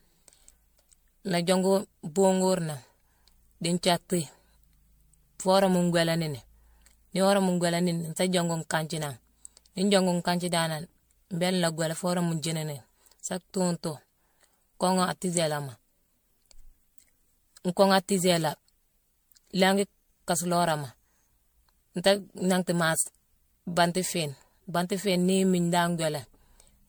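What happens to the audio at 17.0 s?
At 17.0 s, as throughout, the speech has generation loss: swirly, hollow and smeared, with blurred attacks, likely from roughly seven repeated MP3 encodes at about 96 kbit/s.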